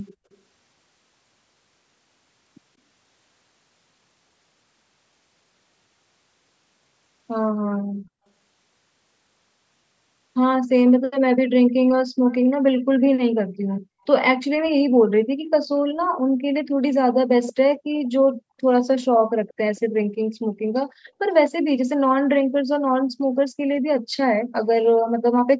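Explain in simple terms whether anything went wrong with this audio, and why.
Echo leak at 0.06–0.11, 0.32–0.37, 10.87–10.92, 12.31–12.53, 17.47–17.53, 19.48–19.54 and 19.76–19.80 s: faint scraps of the voice come back 183 ms late, loudest near 17.5 s. Likely cause: a speakerphone's echo canceller let some of its own playback slip back into the call.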